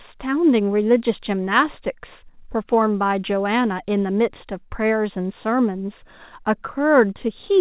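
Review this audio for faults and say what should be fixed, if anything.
Nothing here needs fixing; the speech comes over the call path as expected, with nothing above 4 kHz, which fits a narrowband G.711 line.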